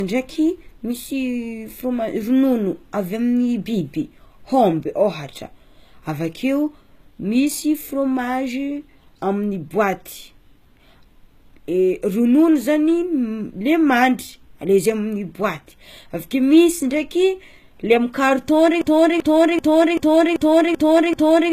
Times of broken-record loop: 18.81-21.52

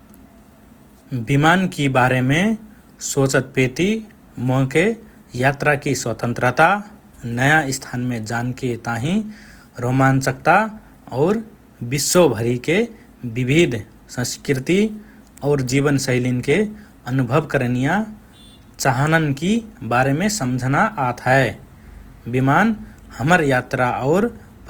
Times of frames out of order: none

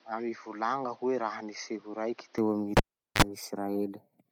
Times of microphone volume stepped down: none

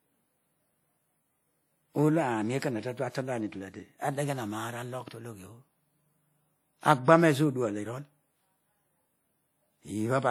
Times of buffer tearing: none

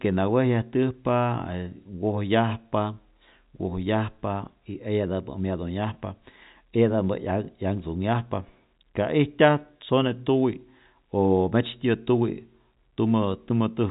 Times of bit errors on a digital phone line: none

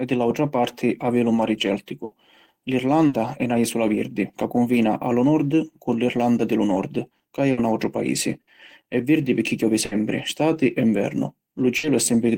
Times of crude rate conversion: none

